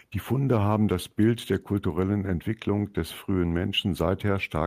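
Nothing in this bit of speech stands out as a technical fault; it just runs along without any glitch catching the ear.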